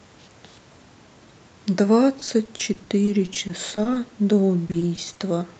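From 2.19 to 3.97 s and again from 4.67 to 5.21 s, repeated packet loss (robotic sound) makes the speech choppy, with many short holes of up to 40 ms patched by stretched sound rather than one clean dropout.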